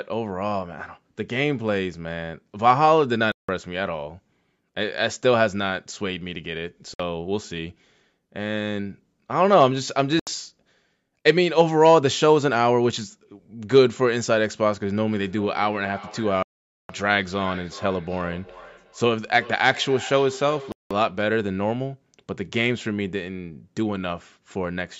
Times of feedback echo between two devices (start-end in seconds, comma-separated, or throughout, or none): 15.11-21.28